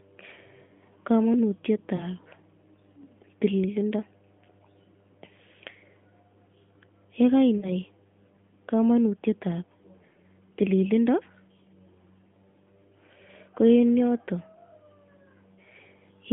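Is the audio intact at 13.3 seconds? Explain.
Yes, the audio is intact at 13.3 seconds: the speech continues through that moment without any dropout, click or other break, carried over the narrowband AMR mobile codec at 12.2 kbps, which confines it to the telephone band of roughly 150 Hz to 3.4 kHz.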